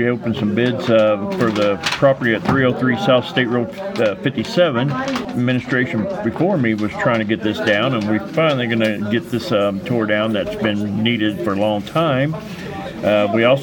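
From the start to about 7.44 s, the audio sounds dull and muffled. The top end falls away gradually. By 10 kHz it sits about 8 dB below the level at 1 kHz. This is de-emphasis applied wrongly. A treble-cut curve meant to reverse pre-emphasis was used on material that never had that boost, or the cut was applied a second time. The slope is smooth, not a sharp filter edge. After 7.44 s the brightness returns.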